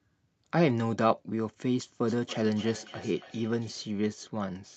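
Speech, carried over a call path whose top end stops at 8 kHz, consistent with Opus coding. From 2.07 to 3.79 s there is feedback echo between two devices: a second device in the room replays the call, this microphone picks it up again, and the local echo canceller cannot remove sound it did not play itself. Repeats return roughly every 0.3 s, reaching about 19 dB below the speech, thinner and more ringing than the original.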